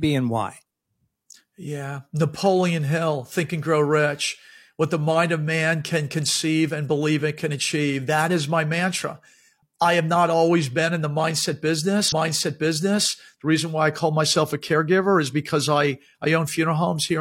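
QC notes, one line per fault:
12.08–13.06 s, stream segment repeated: almost a full second of speech plays a second time, adding 0.98 s. A small blip at the jump back marks the seam. The replay is one long, intact stretch, which points to the player queuing the same segment twice rather than a short buffer stutter.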